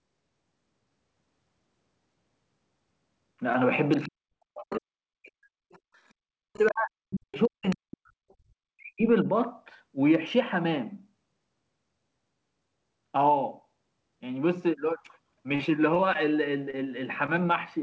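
At 3.53 to 3.55 s comes a short concealed packet loss. About 10 ms of audio arrived too late to decode. The receiver patched the hole by extending the preceding sound, then blended back in. It is heard as a tiny smear. A second one, at 4.31 s, is even briefer.

From 3.91 to 4.09 s, the other side's voice is leaking through. It sits about 30 dB below the talker. The likely cause is the far end playing on a loudspeaker and the echo canceller leaving a residue. A longer stretch runs from 4.73 to 7.76 s, at about 25 dB down. A brief scrap follows at 8.30 to 8.34 s, at about 40 dB down. These are faint.

From 4.06 to 5.01 s, speech is suppressed in double talk. The talker's level falls by as much as roughly 40 dB. Both sides were likely talking at once, so the echo canceller turned everything down. The voice dips and drops out in pieces. It happens again from 6.30 to 9.27 s, with around two seconds affected in total.

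From 15.55 to 16.15 s, repeated packet loss gives a robotic sound. There are four gaps, the longest 41 ms, and about 12% of the stretch is patched. Each fill repeats the last sound before the next gap arrives. The result is choppy, with pieces missing.

Short concealed losses then recur at 16.70 to 16.74 s, 17.26 to 17.29 s, and 17.36 s. They are heard as quick smears. Throughout, the G.722 call path passes nothing above 8 kHz.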